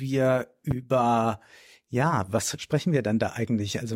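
A loud pop hits between 0.71 and 0.74 s, a single sharp thump roughly 10 dB above the surrounding sound, which continues underneath. It is likely a sudden voltage step from a plug, switch, static discharge or driver glitch entering the signal path.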